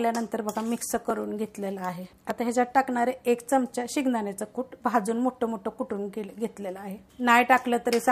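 Two devices in the chain are likely running on separate clocks that disagree by roughly a tenth of a percent, so the buffer between them drifts until it has to drop or repeat a small block of a few dozen samples. These clock drift buffer slips come back every 1.2 s from 1.10 s to 7.11 s, heard as roughly seven evenly spaced clicks that punctuate the audio with mechanical regularity.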